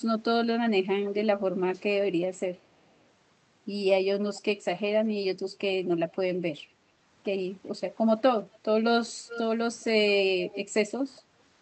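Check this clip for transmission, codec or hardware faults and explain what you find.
Two faults turn up in this speech recording: repeated echo leak and a short dip from background gated by the echo canceller. The call audio itself shows the expected codec band limit near 8 kHz, consistent with Opus.

Echo leak appears at 2.57–2.67, 2.91–3.05, 4.35–4.41, 6.11–6.15, 9.28–9.40, 9.80–9.84 and 10.48–10.65 s. Faint scraps of speech trail the original by about 0.41 s, mostly very quiet but only about 10 dB below the direct level near 9.3 and 10.5 s. They are likely leaked loudspeaker sound the far end's canceller missed. A spectrogram shows delayed, smeared copies of earlier harmonic patterns.

Background gated by the echo canceller occurs at 11.21–11.37 s. The room tone falls by about 7 dB for roughly 150 ms and then recovers, because the canceller clamped the microphone while playback was active. 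The waveform shows a brief notch in the noise floor, and the spectrogram a matching pale vertical band.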